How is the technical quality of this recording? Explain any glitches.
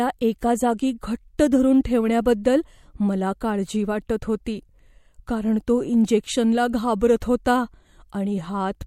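The recording has one recurring glitch: pre-echo in the speech at 1.38, 1.84, 2.44 (just before "मला काळजी वाटत"), 4.45 (just after "मला काळजी वाटत") and 7.20 s (just after "कारण तो इंजेक्शनला"). Each time, 11 to 14 ms of hiss, about 12 to 20 dB above the quiet background, comes before a sharp onset and blurs it. The codec spreads its noise across a block of about 26 ms and never switches to shorter blocks for attacks. Unlike reverb or ringing, the smear comes before the attack, not after it.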